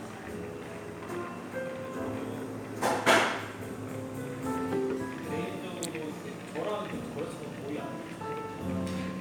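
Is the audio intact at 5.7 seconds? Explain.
Yes, the sound at 5.7 seconds is intact, with no dropout, click or other fault there.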